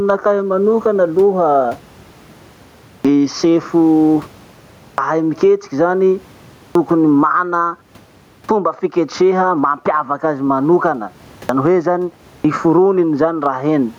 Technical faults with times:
0.00-13.99 gain pumping
2.99-3.05 clipped start after a pause
4.93-4.98 clipped start after a pause
6.70-6.75 clipped start after a pause
8.44-8.49 clipped start after a pause
11.44-11.49 clipped start after a pause
12.39-12.45 clipped start after a pause

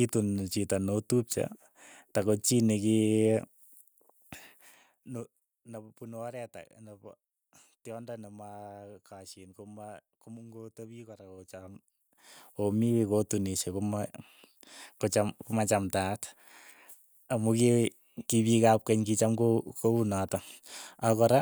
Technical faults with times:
4.28-5.48 zipper noise

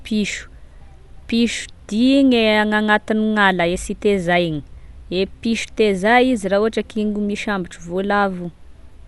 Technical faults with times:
0.00-9.07 Dolby Digital compression

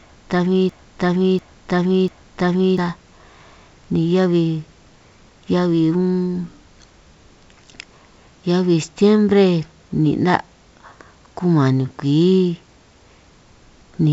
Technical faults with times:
0.00-2.78 broken-record loop

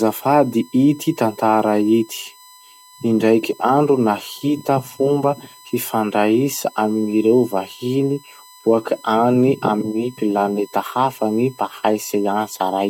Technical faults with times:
0.00-12.89 USB whine

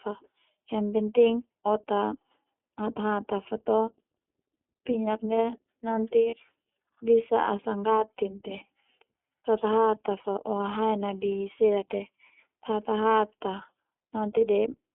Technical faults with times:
0.00-14.94 iLBC codec
6.30-6.34 lost iLBC frames

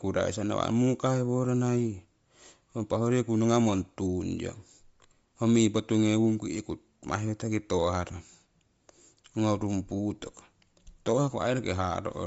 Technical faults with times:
0.00-12.26 Bluetooth LC3 compression

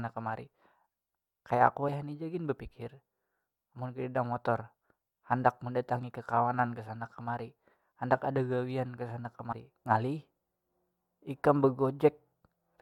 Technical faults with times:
1.88 compressed frames skipped
9.51 compressed frames skipped

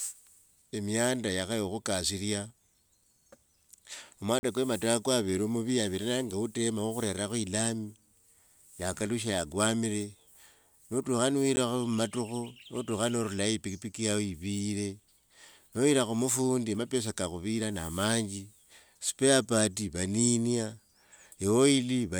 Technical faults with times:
4.39-4.43 block of digital silence
11.56 block of digital silence

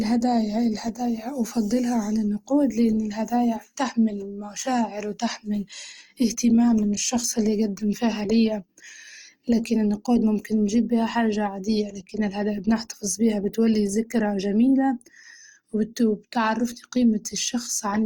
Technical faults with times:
0.00-18.05 Opus compression

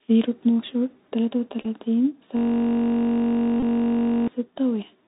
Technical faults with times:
0.00-5.07 Bluetooth CVSD headset codec
1.62-1.65 Bluetooth headset packet repeated
2.37-4.28 system hang loop
3.60-3.63 Bluetooth headset packet repeated

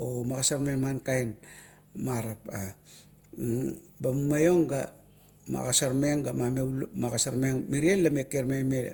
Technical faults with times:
0.00-8.93 generation loss

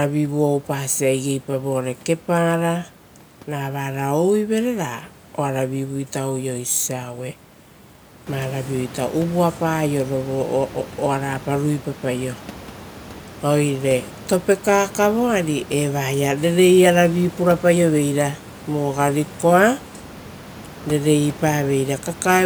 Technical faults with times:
none

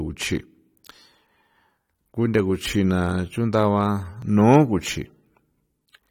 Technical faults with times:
1.77 audio missing between chunks
4.22 audio missing between chunks

